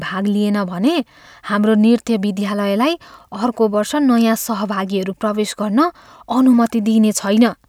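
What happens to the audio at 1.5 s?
Nothing goes wrong at 1.5 s: the speech carries on intact through that moment, with no dropout, click or distortion.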